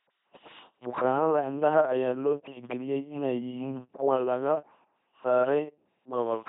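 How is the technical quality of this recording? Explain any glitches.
Poor: the speech sounds buzzing and robotic from start to finish, with nothing above about 3.9 kHz. This is the sound of an LPC-10 vocoder, consistent with a 2.4 kbit/s link, and the damage is heavy. The vocoder discards the real voice and rebuilds it by driving a simple filter that models the vocal tract with either a pulse train or noise. Each moment is forced to be fully voiced or fully unvoiced, which gives the mechanical buzz.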